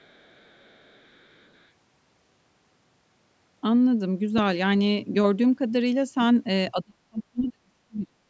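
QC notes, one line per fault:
0.00–1.68 s, other side's voice leaking through. A faint second voice sits far below the main speech, roughly 35 dB down. It is likely loudspeaker playback reaching the microphone that the echo canceller failed to remove completely.
6.72–8.19 s, speech suppressed in double talk. The speech drops sharply, at its deepest by about 40 dB, over roughly a second and a half. Both sides were likely talking at once, so the echo canceller could not separate talker from echo and turned both down.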